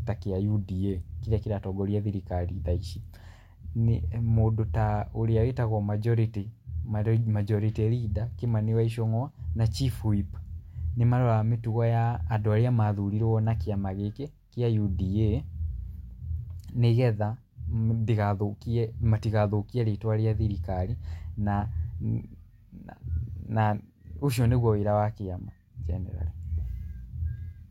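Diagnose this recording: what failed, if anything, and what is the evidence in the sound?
A block size mismatch (truncated) at the driver or buffer stage runs from 12.56 to 14.68 s. Across that stretch the speech carries a steady buzz at 43.1 Hz, the rate at which each block is chopped short. The upstream stage writes longer blocks than the next stage reads, so the tail of every block is discarded. The buzz rate fits 1024-sample blocks at 44.1 kHz. Pitch stays normal, and the speed ratio here is 1.0.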